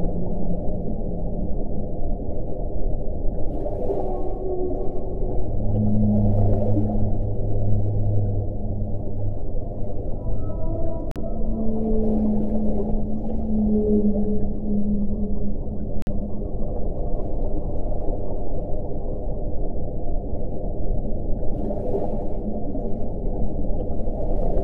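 At 11.11 s and 16.02 s the sound drops to clean silence for 44 and 48 ms, then resumes. That is likely a Bluetooth stall, silent rather than clicking or garbled.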